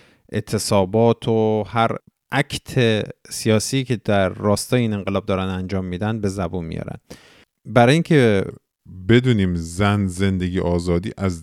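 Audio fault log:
8.50–11.42 s: section at the wrong speed. From here to the end the speech plays at 0.893 times its proper rate, so it drags and drops about two semitones lower, speed and pitch falling together. This likely comes from the section being fitted to the wrong clock.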